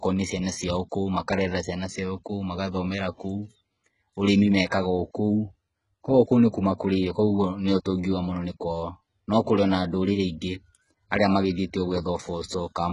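Throughout, s sounds turn gritty and lispy, with nothing above 11.1 kHz. The likely cause is heavy HE-AAC compression copying lower bands upward at a very low bitrate.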